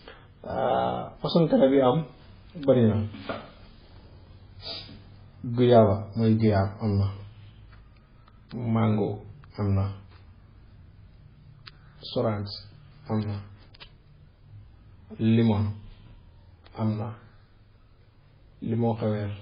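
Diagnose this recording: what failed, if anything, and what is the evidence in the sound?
Codec stage: the whole speech track sounds watery and swirly, with nothing above 5 kHz, so the treble is simply gone. That's likely heavy MP3 compression at a very low bitrate, maybe 16 kbps, cutting the top off and dropping weak frequency lines frame to frame.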